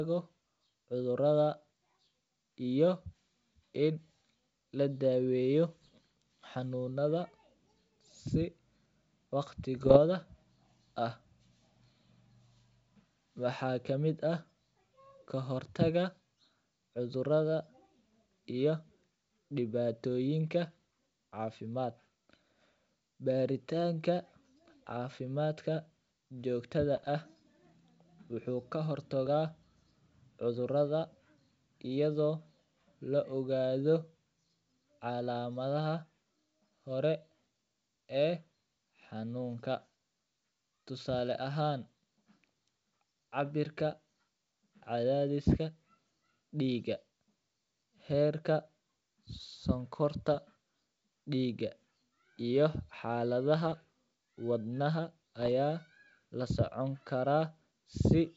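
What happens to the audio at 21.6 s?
Nothing goes wrong at 21.6 s: the speech carries on intact through that moment, with the wideband G.722 telephone coding at 64 kbit/s leaving at most a faint trace.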